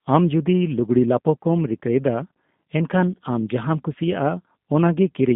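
From start to finish the speech passes through a G.729 codec, and the damage is plainly audible. The codec rebuilds each short frame from a vocal-tract filter, a pitch predictor and a few coded pulses, so voices come out intelligible but rough and slightly synthetic, as fits an 8 kbit/s stream. The line confines everything to 150 Hz–3.6 kHz. A spectrogram shows an empty band above 3.6 kHz and below 150 Hz, with smeared, grainy harmonics in between.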